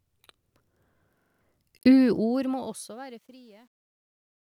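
A system hang loop runs from 1.20 to 1.41 s. The playback system froze while the audio hardware kept cycling the last chunk in its ring buffer, so a 42.67 ms slice of speech repeats exactly five times. That loop length fits a 2048-sample buffer. At a 23.4 Hz repeat rate, the result is a rapid, mechanical stutter rather than a steady buzz, and roughly a fifth of a second of real speech is lost beneath it.

Truncation distortion on a fade sets in at 1.78 s and lasts to the end at 4.45 s. The gain stage that applies the fade drops the low-order bits without dither, behaving like an 11-bit path. As the level shrinks toward the smallest step, the waveform collapses into coarse square stairs. This is worst from 3.1 s onward, where the tail turns gritty.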